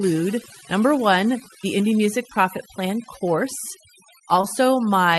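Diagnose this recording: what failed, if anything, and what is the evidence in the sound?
The fault lies in call processing: overdone noise removal across the whole speech clip. The background drops and breaks up into twinkling specks. Quiet bands are gated with the noise. Opus coding at this bandwidth would leave the background intact, not hollowed out.

At the network stage there is short concealed packet loss between 4.41 and 4.45 s, heard as a brief smear or wobble. The gap fits 20 ms of missing audio. The decoder extended the preceding sound and blended it back, so there is no hard silence or click as in a plain dropout.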